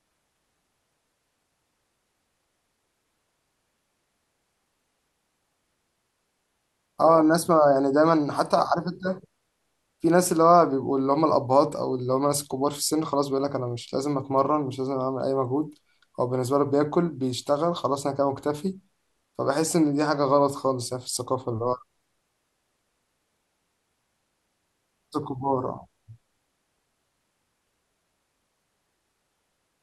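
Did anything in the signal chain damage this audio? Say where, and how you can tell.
No, nothing in this speech recording points to damage at any stage of the signal chain. I can't hear any event or change that would tie a problem to a particular point between capture and playback.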